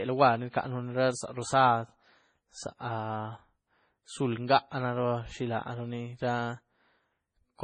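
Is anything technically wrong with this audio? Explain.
Yes. Throughout, likely heavy MP3 compression, consistent with about 24 kbps, leaves the speech with nothing above 9.9 kHz, and starved frequency lines flicker, giving a watery, swirly sound with chirpy s sounds.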